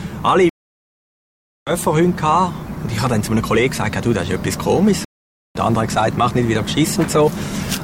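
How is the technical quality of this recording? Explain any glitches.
The recording has two stream reconnect dropouts. From 0.49 to 1.71 s, and again from 5.05 to 5.57 s, the connection broke and the player restarted decoding mid-stream. The sound stops dead for about 1.2 s and then 0.5 s, and resumes roughly one and a half seconds and a third of a second further along, so material is skipped. On a waveform each gap is a flat line. On a spectrogram it is an empty vertical band, with mismatched content on either side.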